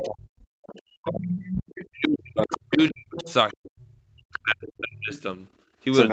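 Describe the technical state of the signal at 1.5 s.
At 1.5 s the other side's voice is leaking through (0.0 to 5.21 s), roughly 10 dB below the talker. This is likely loudspeaker echo the canceller failed to remove. Speech is also suppressed in double talk from 0.01 s to the end. The talker's level dips by as much as roughly 40 dB, likely because the canceller turned down both overlapping voices.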